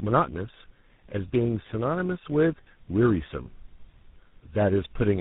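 Rough, muffled and warbly from start to finish, the speech has nothing above 3.8 kHz. This points to tandem speech coding, where the call is decoded and re-encoded at each link. It fits GSM full rate, then G.726, then GSM full rate again, each adding damage to the last.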